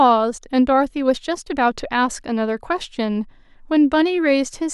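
No technical fault can be heard anywhere in this speech recording, and the signal stays continuous and stable throughout.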